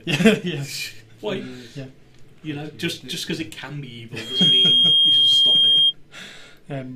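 Microphone-to-loudspeaker loop gain exceeds one at 3.2 kHz, so a loudspeaker feedback squeal swells from 4.17 s to 5.94 s, about 10 dB above the sound.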